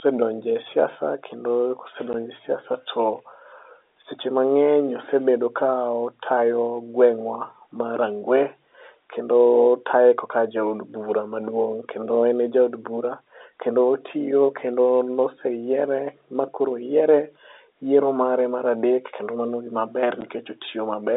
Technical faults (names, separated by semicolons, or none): packet loss filled with silence